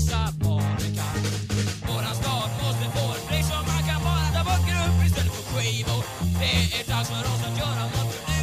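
At 4.31 to 4.44 s there is a skip ahead. A stretch of audio was discarded while later audio was already queued, so playback leaps forward over roughly 0.7 s of material. The two sides are spliced almost directly, with no audible gap.

A jitter buffer speed-up follows at 4.88 to 5.24 s. The buffer was holding more audio than its target, so the receiver repeatedly trimmed short pitch-period pieces, removing about 50 ms. The sound runs 13% fast at unchanged pitch and feels rushed. A gentler 5% speed-up runs from 6.82 s to the end, shedding roughly 70 ms.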